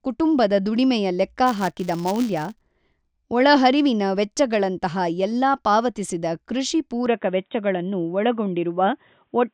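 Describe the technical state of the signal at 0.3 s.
At 0.3 s the speech signal is intact, with no audible technical fault at that point.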